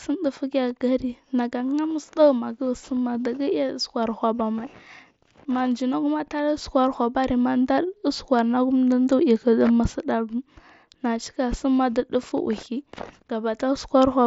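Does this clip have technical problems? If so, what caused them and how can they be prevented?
No, this speech clip has no technical problems to fix. It carries the band limit of a Bluetooth mSBC headset link, with nothing above about 7.7 kHz, which is normal for that wideband headset path.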